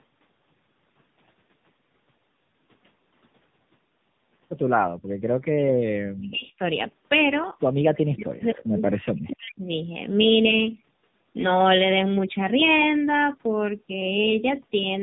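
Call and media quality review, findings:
Tandem speech coding, throughout: rough, muffled, warbly speech, nothing above 3.7 kHz. Two AMR-NB passes with a G.711 hop between, each coder re-coding the last one's degraded output.

Background gated by the echo canceller, 4.95–5.07 s: room sound dips by about 34 dB for about a tenth of a second. The canceller clamped the mic while the loudspeaker played.

Speech suppressed in double talk, 7.87–9.65 s: the talker dips, down by roughly 40 dB over about a second and a half in total. Likely the echo canceller couldn't separate the talker from the far-end echo and turned both down.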